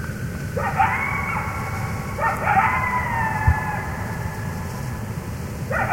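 No technical faults are audible.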